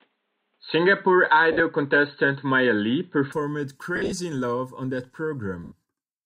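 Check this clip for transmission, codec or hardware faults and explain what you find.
Two kinds of trouble show up in this one: a narrowband stretch at the start, and three short dropouts with the typical Bluetooth LE Audio concealment sound.

From the start to 3.32 s the speech is dull and boxy, with nothing above 4.2 kHz, then it opens up with no gap at the change. That's likely an input switched to a poorer device, such as a headset in call mode. That path's narrower band explains the missing top end, and it carries a faint noise floor of its own, roughly 50 dB down, plus a level shift of around 5 dB.

The dropouts are lost LE Audio frames, at 1.52 to 1.60 s, at 3.96 to 4.12 s, and at 5.64 to 5.72 s just after "on that". The LC3 decoder fills each gap by replaying the last spectrum with scrambled signs, then fading it, so speech briefly turns into a noisy smear. The first gap loses 60 ms over 80 ms, the second 100 ms over 160 ms, and the third 80 ms, which fits 10 ms frames.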